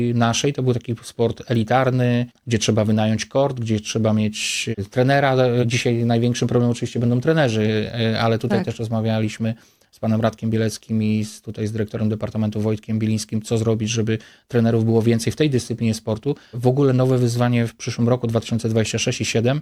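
A single flipped bit in memory or on a digital link corrupts one sample at 1.55 s, jumping its value by a power of two before it snaps straight back. The result is a bit error spike: one sharp, broadband tick peaking at about -19 dBFS, unrelated to the surrounding sound.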